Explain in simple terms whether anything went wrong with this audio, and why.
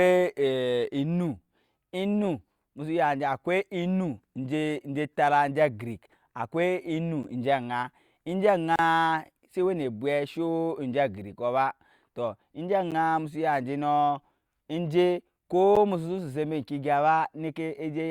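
The speech drops into blocks of digital silence, brief holes of silence, at 7.23 s, 8.76 to 8.79 s, 12.91 s (just before "musu ya enje nɔɔ") and 15.76 s (just after "ya enje nɔɔ enje"). The audio likely wasn't delivered in time; the three short cuts come across as ticks or dips, and the longer one as a short hole. The 11 ms gaps fit a 512-sample buffer.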